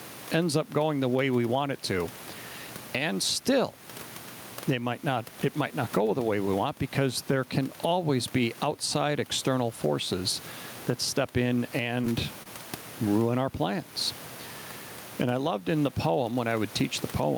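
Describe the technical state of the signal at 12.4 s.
Around 12.43 to 12.47 s there's a short stall from a late packet. The next chunk of audio didn't turn up on time, the jitter buffer ran dry, and the receiver held the last bit of sound, about 28 ms of fill, until the data arrived. Playback then resumed where it left off, so nothing is lost; you just hear that sound hang slightly too long with a slight buzz or dip, and everything after it sits 28 ms later.

Running under that same moment is gain pumping, with level swings of around 15 dB. The likely cause is input gain set far too hot, with a fast limiter clamping down on each loud sound. The room noise sits roughly 29 dB below the speech, the level breathes and the dynamics come out squashed.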